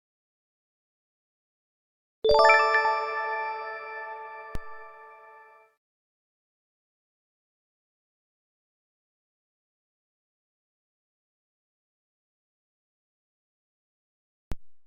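Three DC steps occur, at 2.31, 4.55 and 14.52 s, each a low thump as the waveform's zero line suddenly jumps and then drifts back, which fits a high-pass around 2 Hz bleeding the offset away. On the waveform the baseline visibly lurches; a spectrogram shows brief broadband bottom-end smears.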